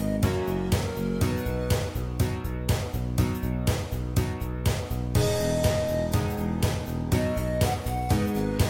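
From 5.42 s to the end at 8.70 s, the sound abruptly turns duller, with nothing above about 16.2 kHz and more codec artefacts, yet no gap. This is an adaptive stream at a lower bitrate, which fits a switch to a low-rate HE-AAC version.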